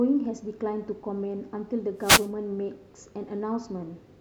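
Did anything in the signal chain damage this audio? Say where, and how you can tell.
Yes. The damage happens in the analogue stage, on the radio link between the wireless microphone and its receiver. From 1.98 to 2.31 s, about a third of a second, a burst of static cuts across the speech. That sound is a wireless microphone noise hit. The FM signal faded as reflected paths cancelled it. The receiver's own noise rose to fill the gap until the signal recovered.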